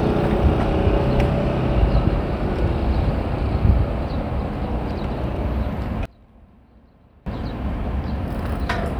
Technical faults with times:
6.05-7.26 one channel inverted

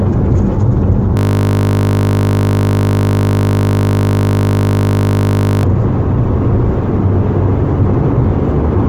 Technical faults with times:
1.17-5.63 system hang loop

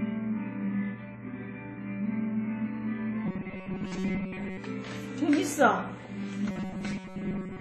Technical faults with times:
0.00-7.60 WMA compression
3.26-4.57 robotic sound from repeated short buffers
6.50-7.60 robotic sound from repeated short buffers

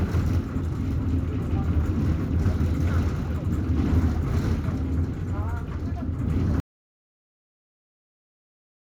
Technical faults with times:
6.60-8.91 audio dropout to silence

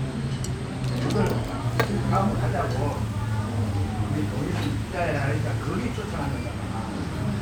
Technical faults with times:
none

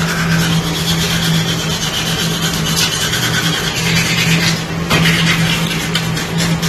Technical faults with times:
0.00-6.68 mains buzz
0.00-6.68 AAC compression

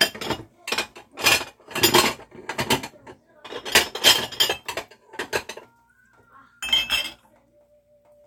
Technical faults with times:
none

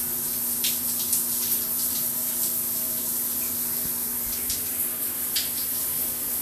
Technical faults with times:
0.00-6.41 Vorbis compression

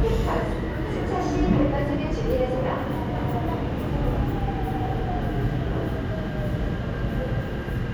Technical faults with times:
none

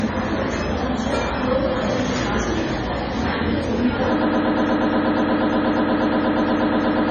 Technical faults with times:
0.00-7.10 MP3 compression
4.21-7.10 broken-record loop

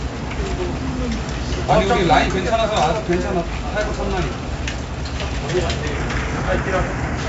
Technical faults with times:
0.00-7.29 4-bit ADPCM compression

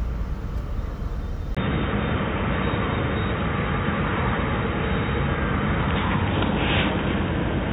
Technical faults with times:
1.55-7.72 input switched to a poorer device

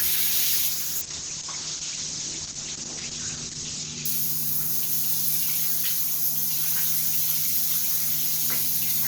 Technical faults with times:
0.70-4.11 call bitrate drop

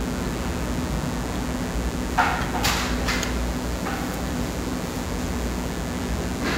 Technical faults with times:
0.00-6.58 mains buzz

